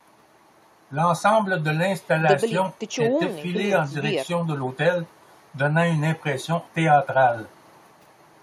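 No technical faults can be heard anywhere in the speech.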